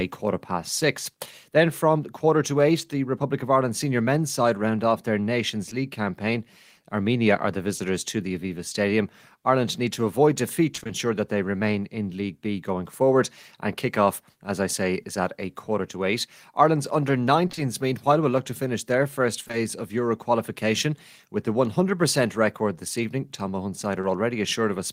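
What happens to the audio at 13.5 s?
Nothing goes wrong at 13.5 s; the speech there plays through intact, with no dropout, click, glitch or other audible fault at that moment.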